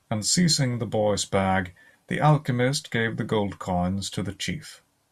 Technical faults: none

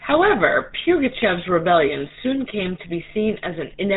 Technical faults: GSM full-rate codec

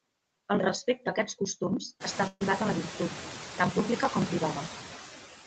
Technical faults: noise suppressor artifacts; burst of packet loss

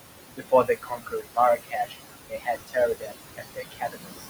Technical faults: noise suppressor artifacts; speech cut by the noise suppressor

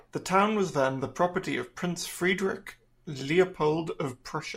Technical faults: none

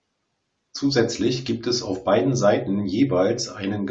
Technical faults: none

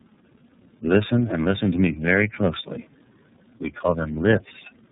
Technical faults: tandem speech coding

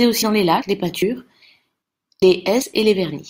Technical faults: audio missing between chunks

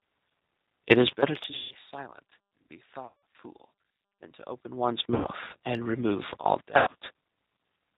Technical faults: G.729 codec; VoIP packet loss concealed by the speech codec

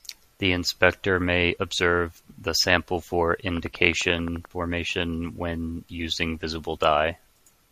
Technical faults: train of clicks

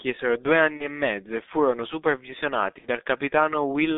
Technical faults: G.723.1 codec; VoIP packet loss concealed by the speech codec

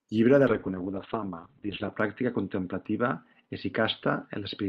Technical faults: call bitrate drop

